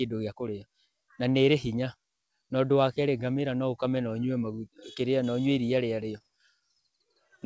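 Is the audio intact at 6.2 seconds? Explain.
No, there's a short concealed packet loss from about 6.18 to 6.22 s. A slice of audio didn't reach the decoder in time, so the receiver extended the preceding sound to bridge the gap and blended back, leaving a brief smear or wobble.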